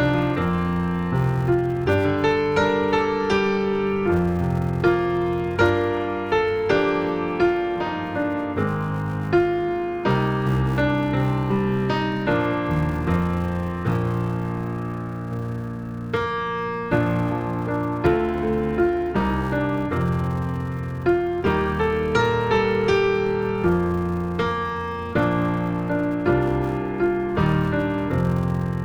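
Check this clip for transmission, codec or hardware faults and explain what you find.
One fault runs through the whole clip: a filter restarted on every block. Each block starts from silence, leaving a small transient. These form a 200 Hz buzz that tracks the signal's level.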